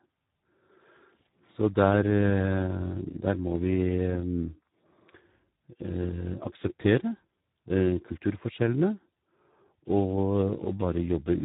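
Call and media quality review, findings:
Speex codec, whole clip: speech encoded at a low-quality setting, consistent with a bitrate around 8 kbps. Too few bits left for the CELP excitation, so the signal is rebuilt from a coarse model. Result: heavy damage, with speech hoarse and noisy throughout. Band cut at 3.8 kHz with nothing above, giving dull, narrowband speech.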